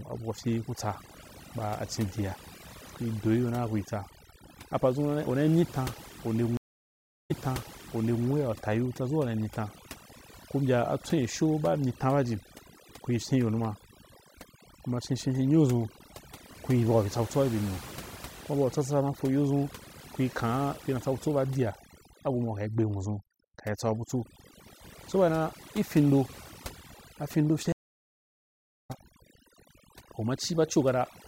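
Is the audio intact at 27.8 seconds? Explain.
No. A stream reconnect runs from 27.72 to 28.91 s. The connection dropped, so playback goes silent for about 1.14 s, then a fresh decoder picks up mid-stream, resuming roughly 0.7 s further on, so a short stretch of speech is skipped. Overdone noise removal is also present here as throughout: bands near the noise estimate are pushed down or cut, leaving near-silent gaps with twinkling specks and quiet parts of the speech cut along with them.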